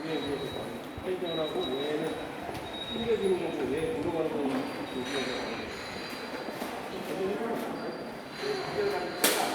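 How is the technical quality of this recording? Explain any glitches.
No glitches, dropouts or other transport faults are audible anywhere in the recording.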